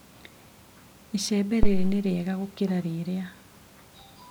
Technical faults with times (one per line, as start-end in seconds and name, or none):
1.63-2.07 phantom power thump